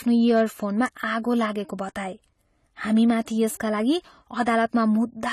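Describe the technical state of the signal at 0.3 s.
At 0.3 s the speech is hard clipping. The span runs from 0.14 to 0.42 s. The level is driven about 3 dB past what the signal path can carry, so the peaks are sliced flat. Those squared-off tops add harmonics high in the spectrum. The result is a crackly, gritty edge on the louder parts of the sound. It is brief.

The same moment also carries a dull, smeared tone that runs through the whole clip. The cause is likely AAC compression. Nothing is present above 14.1 kHz, so the top end is simply gone. The damage is plainly audible. It has the muffled, slightly watery character of coarse spectral quantisation, which fits a low bitrate around 32 kbps. Sibilants lose their crispness and take on a fizz.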